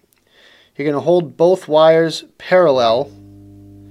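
A ground loop or a nearby transformer is coupling the 50 Hz power line into the signal path, producing mains hum from 2.71 s to the end at 3.90 s: a steady low tone with some low harmonics, sitting roughly 30 dB below the audio.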